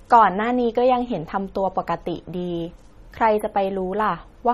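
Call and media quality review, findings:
Watery, swirly speech throughout, nothing above 14.6 kHz; likely MP3 compression near 32 kbps. Unlike a plain low-pass, weak spectral lines flicker frame to frame, smearing sibilants and attacks.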